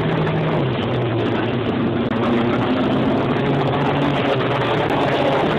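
At 2.09 s the sound breaks with a CD skip. The laser loses its place on the disc's spiral and lands on another turn. The player mutes for about 20 ms, then carries on from a different point. You hear a small tick and an abrupt jump in the flow. At 4.89 s a second CD skip follows. This mute is shorter, about 10 ms. Again a tick marks the jump.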